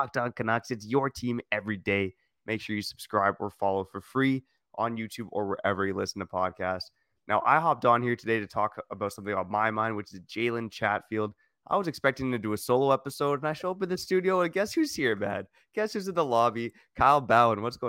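From start to finish the speech carries imaging from linear upsampling. The audio was raised from 22 kHz to 44.1 kHz by joining samples with straight lines, which filters poorly. The top of the original band is dulled, and a faint mirrored copy of the spectrum, roughly 35 dB below the signal, fills the region from about 11 kHz to 22 kHz. It is heard as a light metallic shimmer on sibilants. A spectrogram shows an upside-down reflection of the speech above 11 kHz.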